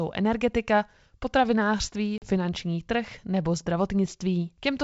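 At about 2.18 s, just after "energetika potravinářství", the speech drops into a hard-edged silent hole of about 40 ms. This is packet loss on an ADPCM call, with a couple of packets missing. The gap was filled with silence. The receiving decoder's predictor and step size then no longer matched the sender's. When sound resumes, it comes back slightly distorted. It settles by about 2.28 s, before "trh nebo".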